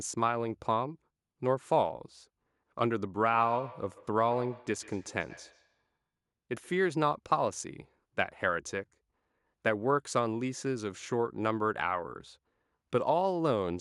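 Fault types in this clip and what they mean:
Feedback echo between two devices: two devices in the same room sit on one call, so one plays back what the other's microphone sent, and that microphone picks it up again. Each device's echo canceller only cleans up its own playback, so the loop stays open. Here it runs from about 3.19 to 6.92 s, with the speech coming back roughly every 150 ms, thinner and more ringing, peaking at about 18 dB below the speech.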